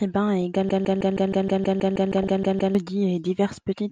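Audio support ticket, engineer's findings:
Dull, band-limited speech throughout, with a gurgling, granular grain and upper bands flickering in and out. Likely cause: MP2 compression at a low rate, which fits around 80 kbps. Too few bits for the upper sub-bands, so they are switched off intermittently and the remaining bands are coarsely quantised.

Brief watery blips at 0.42 s, and a longer burbling stretch at 2.13–2.29 s. DAB burbling: weak reception let residual bit errors, light at 0.42 s and somewhat heavier at 2.13 s, through error correction into the MP2 data. Corrupted samples put short noise blips in single sub-bands, and corrupted scale factors make sub-bands jump in level for up to a frame.

Same 158 ms fragment repeating back to back 13 times, 0.69–2.75 s, stuttering like a broken-record loop. The programme that should have played in that span is missing. Likely cause: a stalled player, encoder or stream resending its last buffered fragment. 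The second burbling burst falls inside this loop.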